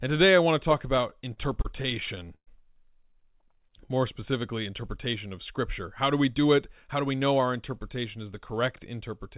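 Repeated stalls (stutter) begin at 1.1 s, just after "I want to talk", and last until 2.49 s. The audio arrived too late or too slowly to keep the jitter buffer filled, so it ran dry fifteen times. At each gap the receiver stretched the last sound to bridge the wait, covering 305 ms in all, about 22% of that stretch, with the longest hold at 119 ms. Nothing is lost, but the speech drags and catches.

A jitter buffer slow-down runs from 3.39 s to 4.32 s and ends just before "interpretation of". The buffer was short of reserve, so the receiver repeated individual pitch cycles and bits of pause to rebuild it. This added 65 ms and brought the speech to 93% of its normal pace. The pitch stays the same, so the effect is a lazy, drawn-out delivery rather than a deeper voice.

A jitter buffer speed-up follows from 6.29 s to 7.47 s, between "do we" and "interpretation is the". Too much audio had built up in the buffer, as happens when late packets arrive in a burst, and the receiver cut it back by removing short runs of pitch cycles, roughly 70 ms in total. 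The speech runs at 106% of its normal rate with unchanged pitch and sounds slightly rushed. Throughout the clip, the call path's cut-off with nothing above 4 kHz gives the telephone-band sound that points to G.711 mu-law at 64 kbps.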